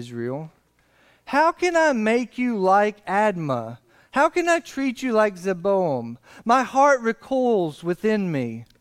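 No technical faults can be heard anywhere in the recording.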